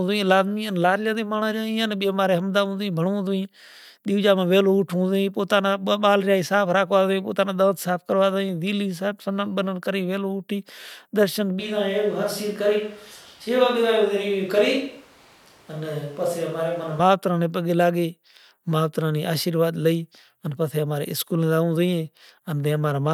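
A speech recording where, just after "کری ویلو اٹھی درشن" at 11.6 s, the voice abruptly turns roomy, hollow and thin, drops roughly 5 dB, and gains background noise near 30 dB below the speech until 17.0 s. This is likely a switch to a distant microphone, standing in for the close one.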